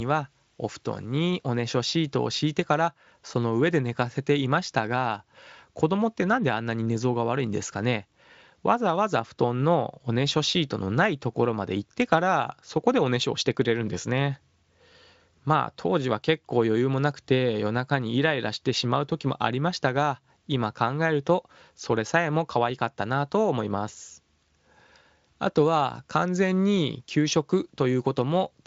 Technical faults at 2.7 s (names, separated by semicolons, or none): none